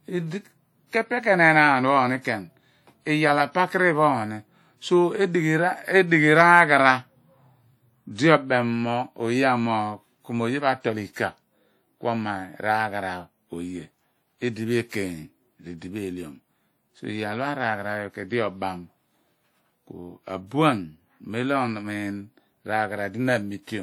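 A speech recording with plainly audible coding damage, likely from WMA compression at a rate around 48 kbps: ringing, washy hiss breathing with the signal, visible as smeared, blotchy spectrogram texture with weak components missing. Pre-echo appears at 8.16–8.18 s and 11.13–11.16 s, just after "pho atol": short hiss 24 and 29 ms before attacks, seen as noise ahead of waveform onsets.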